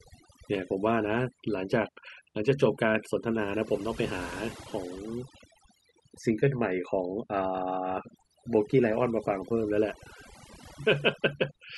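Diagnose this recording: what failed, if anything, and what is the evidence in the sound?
Overdone noise removal in the processing stage: a suppressor set too aggressively, pulling frequency bands down or out whenever they sat near its noise estimate. Throughout the speech, the background drops and breaks up into twinkling specks, and quieter vocal detail vanishes.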